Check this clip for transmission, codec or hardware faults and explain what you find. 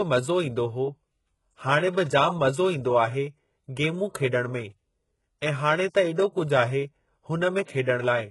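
Two codec faults stand out in this speech clip. Throughout, the treble has a gritty, metallic sheen, with s sounds turning lispy and nothing above 11.5 kHz. That is likely HE-AAC compression at a very low bitrate, around 12 kbps. The upper band is rebuilt by copying lower harmonics upward, so they misalign. This differs from plain lowpass dulling because the top stays bright but synthetic.

From 7.64 to 7.68 s, a short pre-echo hiss spreads about 37 ms ahead of an attack. The block's quantisation noise leaks into the quiet lead-in, softening the onset. Unlike reverb or a click, the smear comes before the attack and not after it.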